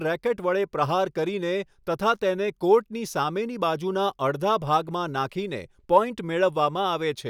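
Nothing stood out on listening to this speech recording.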